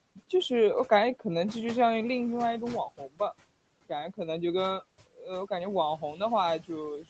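At 2.97 to 3.20 s and again at 5.07 to 5.26 s, speech is cut by the noise suppressor, which mistakes low-level parts of the talker for background and pulls them down by about 15 dB and about 16 dB. Roughly a tenth of a second in each span sounds swallowed and faint. A waveform shows the envelope sagging, and a spectrogram shows the speech harmonics thinning to the faint room-noise floor.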